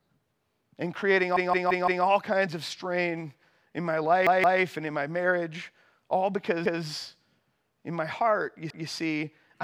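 Repeated buffer at 1.37–2.05 s, 4.27–4.61 s, 6.66–6.83 s and 8.70–8.88 s: new audio arrived late, so the same 0.17 s slice, consistent with an 8192-sample buffer, replays four, two, one and one extra times, stuttering the speech with hard joins.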